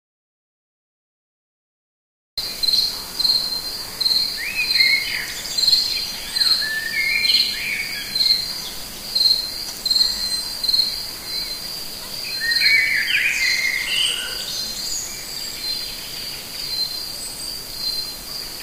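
From the start to 2.37 s there is silence without room tone, an audio dropout to silence, likely lost input while recording continued.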